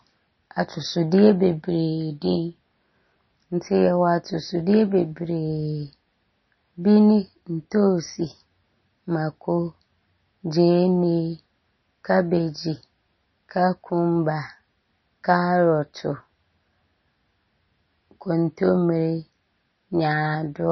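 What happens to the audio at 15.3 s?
At 15.3 s, as throughout the clip, the speech shows MP3 compression, likely at a starved bitrate near 25 kbps. The encoder has dropped everything above 5.9 kHz and zeroed weak frequency lines, leaving dull, watery, swirling sound with chirpy s sounds.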